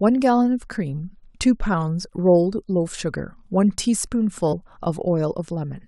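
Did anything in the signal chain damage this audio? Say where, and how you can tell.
Yes. At the codec or storage stage, compressed frames were skipped: the decoder never played whole frames at 1.73 s and 2.98 s (about one each) or at 4.52 to 4.54 s (roughly four, about 100 ms). The jumps fit a 23.2 ms frame.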